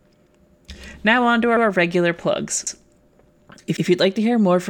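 The speech stutters at 0.47–0.57 s, 1.57–1.67 s (between "on to" and "regular plugs"), 2.67–2.77 s (just after "regular plugs") and 3.77–3.87 s. These are overlapping chunks: each 1.0 s block begins 100 ms before the previous one ended, so that 100 ms plays twice. The result is a click and a brief echo-like repeat every 1.1 s. In the waveform, a short stretch appears copied side by side. On a spectrogram, a sharp vertical line marks each join, followed by a duplicated 100 ms pattern.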